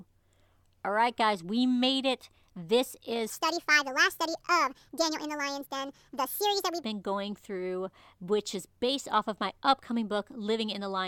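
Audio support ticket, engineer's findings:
Section at the wrong speed, 3.30 to 6.84 s: likely clock mismatch, played at 1.51x. Speech about seven semitones high, hurried, until "been going through".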